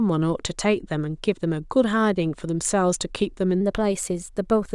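This speech clip has a wrong sample rate fault from 3.61 s to the end at 4.75 s. That stretch plays about 1.09 times too fast. Pitch rises by about 1.5 semitones, so the voice sounds higher and hurried. The ratio fits audio recorded at 22 kHz but played at 24 kHz without conversion.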